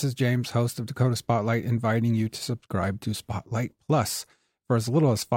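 A speech recording with clock slip clicks from 0.23 s to 5.26 s. Faint, evenly spaced ticks recur about every 0.3 s, around twenty in all. Each one is a single sample jumping out of place. The likely cause is two devices running on separate, unsynchronised clocks that differ by something near 100 ppm. As that mismatch builds to a full sample, one sample gets dropped or repeated, and the waveform jumps.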